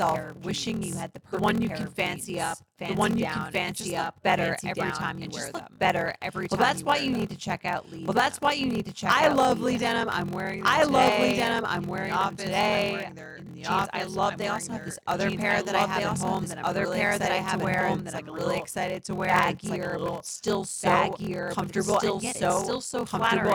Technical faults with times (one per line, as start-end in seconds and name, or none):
0.00-23.54 doubled audio track
0.00-23.54 block size mismatch (padded)